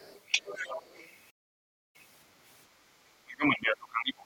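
A speech clip with three faults. The other side's voice leaking through appears twice: faintly, far below the talker, from 0.00 to 0.21 s, then more prominently, though still well under the main speech, from 0.38 to 1.09 s. This is likely residual loudspeaker echo that the echo canceller failed to subtract from the microphone signal. A playback stall follows from 1.30 to 1.96 s. The audio cuts to silence for roughly 0.64 s mid-flow before continuing, consistent with the player running short of buffered data or its output thread being held up. From 3.24 s to the end, the talker's speech is suppressed in double talk, with level pulled down by as much as about 25 dB. This likely happens because both ends speak together and the canceller attenuates the near-end voice along with the echo it cannot separate.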